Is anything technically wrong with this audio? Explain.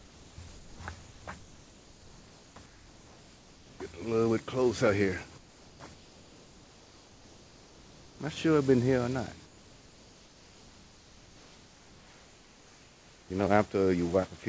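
Yes. Comfort noise replaces the background in the pauses at 0.00–0.38, 0.48–0.80, 1.00–1.26, 1.40–2.56, 2.66–3.80, 5.38–5.80, 5.94–8.20 and 9.46–13.30 s. The likely cause is discontinuous transmission, with the receiver synthesising a stand-in. The real background gives way to a flat, featureless hiss about 3 to 4 dB quieter. Unlike a noise gate or dropout, the gaps never fall to silence. The band stops at 8 kHz, which fits a G.722 call path.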